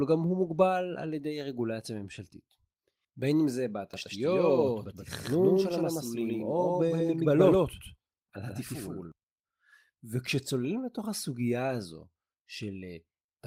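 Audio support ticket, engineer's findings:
Doubled audio track, speech, 3.94–9.12 s. Second full-band copy trails around 150 ms behind at roughly equal level, no decay. Likely a second capture path or misaligned edit. Spectrogram: every band repeated, offset; waveform shows abrupt onset/offset of duplicate.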